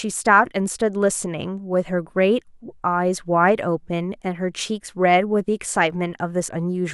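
From 5.40 to 6.65 s, periodic USB or driver dropouts skip a fraction of a millisecond every 0.25 s, producing around seven evenly spaced ticks.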